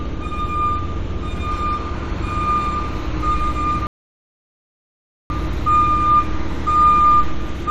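At 3.87 s the player ran dry of downloaded audio and halted playback until more data arrived, a rebuffering stall. The sound drops abruptly into silence and stays there until 5.30 s, then picks up at exactly the point where it broke off. Nothing is skipped or repeated; the stall simply inserts about 1.43 s of dead air into the sounds, stretching the clip's timeline.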